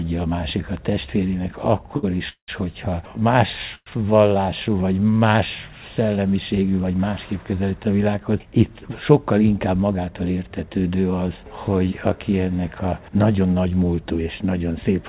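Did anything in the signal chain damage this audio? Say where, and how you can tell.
Yes, the damage happened in the network and jitter-buffer stage of the call path, which otherwise carries the audio through G.711 mu-law at 64 kbps and leaves nothing above 4 kHz. First there is a short stall from a late packet. At 1.97 to 2.05 s a packet missed its playout time and the buffer emptied. The receiver held the last sound for 62 ms until the packet arrived, then resumed from the same point. You hear a briefly stretched sound with a faint buzz or dip, and nothing is lost.

Next come two call audio freezes, at 2.29 to 2.50 s and 3.75 to 3.88 s. The likely cause is packets held up in transit long enough to drain the buffer. The receiver continued the last sound as a fading buzz or hiss that dies to silence, 120 ms of it in the first freeze and 50 ms in the second. This adds gaps of 191 ms and 113 ms, and the sound picks up exactly where it stopped.

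Finally there is a jitter buffer speed-up from 9.32 to 9.99 s, after the buffer overfilled. To shed the extra delay, the receiver cut many short pitch-period pieces in a row, about a tenth of a second in total. The sound runs at 112% speed with unchanged pitch, so that stretch comes across as hurried.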